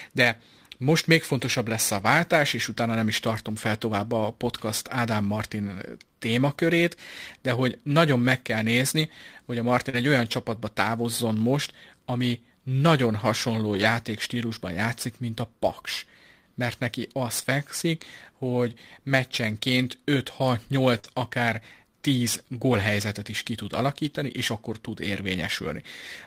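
Speech clip with two kinds of network damage. The first is lost packets rebuilt from error correction: at 1.97–2.03 s (right after "még fontosabb lesz a"), 9.93–9.95 s, 13.73–13.83 s, 21.04–21.06 s and 22.72–22.74 s the sound turns briefly rougher and noisier with no gap. That fits the decoder playing the low-bitrate backup copies carried in the following packets, roughly 20–60 ms worth each time. The second is short concealed packet loss, at 9.89–9.95 s (just before "egy olyan csapatba távozzon") and 20.99–21.06 s. There about 40 ms never arrived, and the receiver bridged the hole by extending the preceding sound, which comes across as a quick smear or wobble before it blends back.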